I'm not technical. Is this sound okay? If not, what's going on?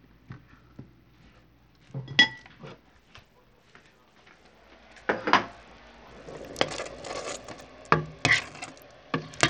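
No. From start to finish the sound has a gritty, grainy edge, and the crisp high end keeps thinning out or flickering instead of staying steady. This is typical of Bluetooth SBC compression, the likely cause here. The sound was squeezed hard to fit over a wireless link, so the highest frequencies got too little data to survive intact, and everything else was stored roughly, leaving that rough noise clinging to the audio.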